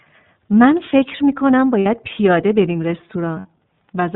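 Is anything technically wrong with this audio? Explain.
Yes. The speech runs through the iLBC codec for its whole length. Nothing above 4 kHz survives, and the damage is plainly audible. Each frame's excitation is coded on its own at a low rate, which fits 30 ms frames at about 13 kbps. This leaves the voice narrow, rough and slightly synthetic.

There are lost iLBC frames twice, at 1.80 to 1.86 s and at 3.39 to 3.45 s. Each gap lasts 60 ms, which fits two frames. The decoder fills it by repeating the last pitch cycle mixed with noise, so each gap sounds like a held, buzzy vowel. Normal speech returns almost immediately afterwards.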